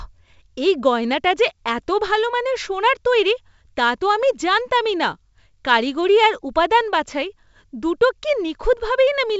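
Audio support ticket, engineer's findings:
No faults found; the speech sits in a wideband telephone channel with nothing above about 7.7 kHz, consistent with G.722 wideband telephone coding at its full 64 kbit/s rate, with coding effects faint at most.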